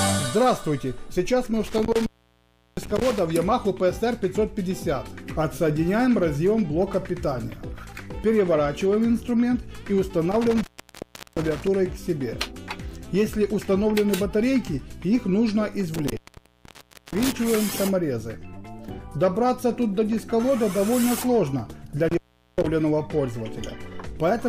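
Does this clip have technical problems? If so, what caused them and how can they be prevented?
Yes. Intermittent contact occurs at 1.6–3.2 s, 10.3–11.7 s, 15.9–17.4 s and 22.1–22.7 s. A loose cable or plug opens the signal path, cutting the sound for 0.4–0.96 s with crackle at each edge. Prevent it by seating connectors firmly and replacing worn cables.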